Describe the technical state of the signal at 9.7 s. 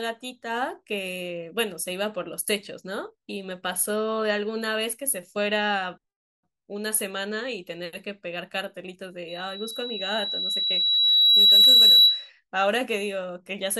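At 9.7 s a loudspeaker feedback squeal is building: mic-to-speaker loop gain exceeds unity at 3.9 kHz, swelling over roughly two seconds from 9.28 s until 12.30 s.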